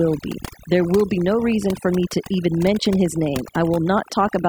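A noise reduction stage set far too aggressively runs through the whole clip, gating individual frequency bands whenever they approach its noise estimate and taking quiet speech detail with them. The result is overdone noise removal: a near-silent background flecked with twinkling artefacts.

From 0.89 s to the end, a nearby Wi-Fi radio's beacon transmissions, every 102.4 ms, are being rectified by the audio circuitry. This Wi-Fi interference is heard as a steady ticking just under ten times a second, roughly 30 dB below the speech.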